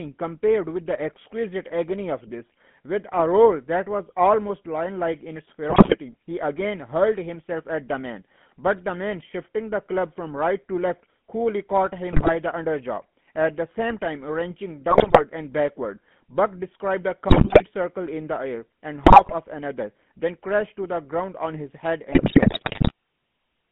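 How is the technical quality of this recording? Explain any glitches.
The recording has poor technical quality. It is telephone speech with plainly audible codec coloration, and there are six short bursts of digital corruption.

GSM full-rate codec: This runs through the whole clip. The speech is confined to roughly 150 Hz to 3.4 kHz. A coarse vocal-tract model drives a sparse pulse excitation. This makes voices buzzy and gravelly, which fits a 13 kbps GSM full-rate stream.

GSM bit errors: These occur at 5.7–5.97 s, 12.12–12.32 s, 14.9–15.22 s, 17.28–17.63 s, 19.04–19.34 s and 22.12–22.92 s. Corrupted bits reach the decoder's filter, pitch and gain values. Frames come out with distorted spectra or level spikes. You hear squawks, pops and gargling. The last burst is longest.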